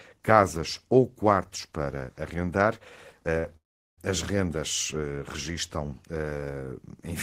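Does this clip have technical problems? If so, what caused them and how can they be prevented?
Yes. At 3.38 to 3.46 s, just after "ou quartos para arrendar", there is a short stall from a late packet. The jitter buffer ran empty, so the last sound is held for 61 ms and then resumes where it stopped. Nothing is lost, but the delay grows by 61 ms. A slightly deeper jitter buffer would prevent it.

From 3.57 to 3.99 s, just before "as rendas", there is a call audio freeze. The sound stops for about 0.41 s, most of it (390 ms) silent, then continues with nothing missing. The likely cause is packets held up in transit, which drained the jitter buffer. Adaptive buffering and prioritised (QoS) network paths would prevent it.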